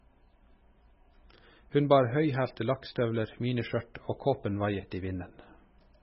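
Throughout, the speech stops dead at 5.5 kHz, a flat spectrogram ceiling with flickering holes below. It sounds watery and swirly, likely from heavy MP3 compression at a very low bitrate.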